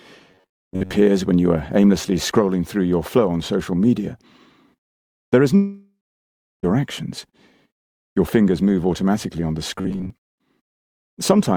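From 0.31 to 0.93 s, the sound turns into a rigid, metallic buzz near 94 Hz. This is robotic sound from repeated short buffers, likely caused by audio arriving too seldom. The player repeats a slice of about 10.7 ms, and most of the real audio is skipped. The same buzz returns from 9.75 to 10.10 s.

At 5.55 s, a long network dropout is the likely cause of a gap lasting about 1.08 s. A fading buzz or hiss fills the gap, then about 0.68 s of silence follows. The audio resumes at 6.65 s, and the missing part never plays.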